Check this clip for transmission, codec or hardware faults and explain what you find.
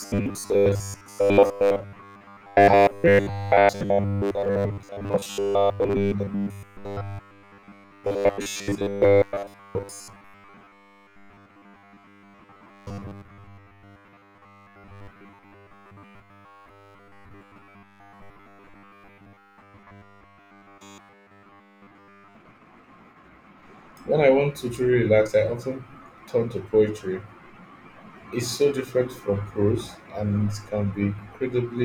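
One fault affects most of the clip. From 0.01 to 22.35 s, robotic sound from repeated short buffers: the speech becomes a rigid metallic buzz at 100 Hz, likely from a 10 ms buffer being replayed while fresh audio is skipped. A spectrogram shows evenly spaced 100 Hz harmonic lines, and the waveform shows a 10 ms segment repeating.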